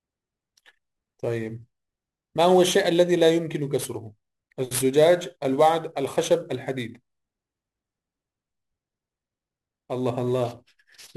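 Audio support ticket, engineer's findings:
Sample clock jitter, whole clip. Unstable converter clock, timing error around 10 µs rms; sampling instants wander, error scaling with waveform slope. Rough hiss on speech about 20 dB below signal, strongest on loud, bright sounds, gone in pauses.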